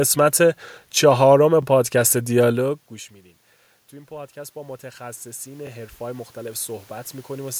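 At 1.62 to 1.65 s, and again at 3.65 to 3.67 s, you get the first overlapping chunks: each 2-second chunk starts about 23 ms early, so that sliver repeats as a small stutter. From 3.9 s to the end, automatic gain rising kicks in. The input drops by about 22 dB, so the gain slowly climbs and the speech and room noise swell up together. The same overlapping-chunk stutter comes back at 5.67 to 5.69 s, right on the 2-second rhythm.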